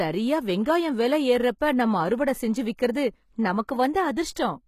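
The speech has HE-AAC compression damage throughout: the treble above the core band, cut off near 14.9 kHz, is rebuilt by copying lower bands upward. This likely points to a low bitrate around 20 kbps, and s sounds come out gritty and metallic.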